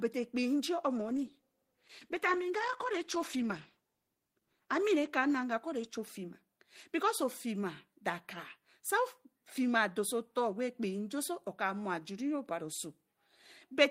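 At 0.99 s the call's bandwidth estimate collapses and the encoder is told to spend far fewer bits, a call bitrate drop. The sound points to a fall from around 32 kbps to about 13 kbps. With so few bits, Opus codes the speech coarsely and trims away the high frequencies, so the speech turns muffled, rough and watery. The worst stretch lasts about 3.6 s, and clarity returns by 6.73 s as the bitrate recovers.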